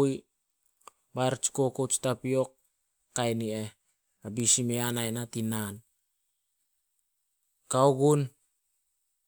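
Nothing stood out as a technical fault on listening to this speech recording.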